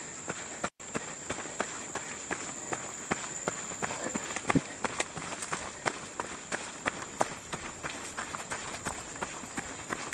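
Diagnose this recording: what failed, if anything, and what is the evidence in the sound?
The codec side failed, driven by the network: it's an adaptive stream at a lower bitrate. At 6.95 s the quality drops abruptly with no gap, and stays down to the end. Codec artefacts climb. The connection slowed, so the player switched to a leaner encoding, and the sound fits a step from roughly 64 kbit/s Opus down to around 24 kbit/s.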